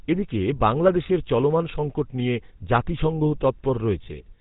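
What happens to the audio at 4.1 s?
Lost GSM frames hit just before that, from 4.04 to 4.08 s. The decoder repeats the last good frame's settings, holding the sound as a brief, rough metallic ring, consistent with one dropped 20 ms frame. Underneath, the GSM full-rate codec's damage is plainly audible: a buzzy, gravelly roughness from pulse-driven vocal-tract modelling, with nothing above 4 kHz.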